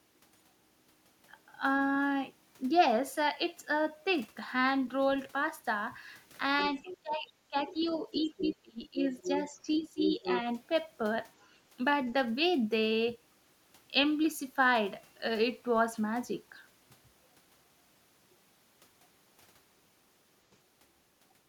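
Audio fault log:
6.62–6.97, 7.81–9.41 and 10.07–10.42 s, other side's voice leaking through: a second, fainter voice sits under the talker in three scraps, the middle one lasting well over a second. It gets louder each time, from about 15 dB below the talker, to about 10 dB, to only about 5 dB below by the last one. The likely cause is a loudspeaker on the talker's end feeding back into the mic, with the echo canceller not fully removing it.
6.65–9.01 and 9.5–10.27 s, speech suppressed in double talk: the talker's own voice keeps ducking. In the first stretch about a second of it in total gets pulled down, dipping as much as around 25 dB. In the second, around a third of a second is hit, by up to about 15 dB. This is likely the echo canceller, unable to separate the talker from the echo while both sides were talking, turning everything down together.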